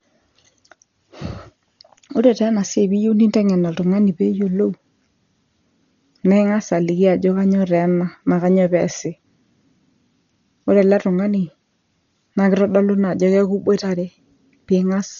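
Throughout the speech, the sound is dull and band-limited, with nothing above 6.9 kHz. Heavy codec damage runs the whole length. A rough, fluttering noise sits around the tonal parts of the speech. The likely cause is Dolby Digital compression at a very low bitrate, which fits roughly 40 kbps. At that rate the encoder cuts the top of the band. It leaves many frequency lines without mantissa bits, and the decoder fills them with dither noise.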